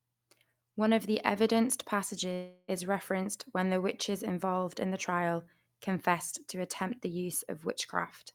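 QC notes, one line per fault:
2.33–2.70 s, long network dropout: the incoming stream likely stopped delivering audio for about a third of a second, leaving the receiver with nothing real to play. It stretched the last fragment of speech into a fading, buzzy tail lasting about 0.35 s, followed by a brief silence of about 10 ms. When speech resumes, about 0.34 s of the original is gone, so the talking jumps forward instead of continuing from the break.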